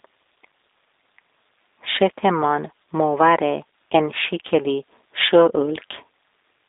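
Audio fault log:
throughout, G.729 codec: The speech is narrow and boxed-in, with nothing below about 300 Hz or above 3.7 kHz, and it has a plainly audible rough, buzzy, slightly synthetic edge. The G.729 coder does not transmit the waveform. It rebuilds each 10 ms frame from a vocal tract filter, a pitch predictor and a few sparse pulses, and that coarse rebuilding causes the grit. The thinness and level of damage fit an 8 kbit/s telephone-grade line.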